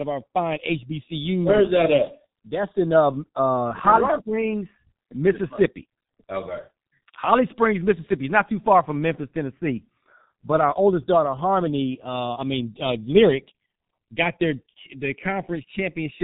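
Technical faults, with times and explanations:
Throughout, G.723.1 codec: The speech is muffled and hoarse, with nothing above 3.8 kHz. Consonants blur because each 30 ms frame keeps only a coarse voice model that updates slowly. The heavy damage fits a very low bitrate, around 6.3 kbit/s.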